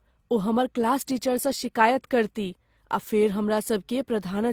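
Throughout, the speech carries two layers of codec smear heard together, with nothing above 20.2 kHz. The likely cause is transcoding between lossy codecs, with an HE-AAC-style encode re-encoded by Opus.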